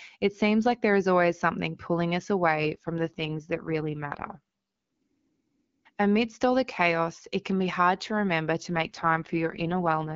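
Speech carried over the AMR wideband (HD Voice) codec, with light codec texture. There are two AMR rate drops. The first follows "always something pulling us" and runs from 2.56 to 4.39 s. The second follows "hard to remember to" and runs from 8.69 s to the end. The band stays the same and there is no gap, but the voice turns rough and raspy. That fits a weak radio link forcing the codec from 12.65 down to 6.6 kbit/s.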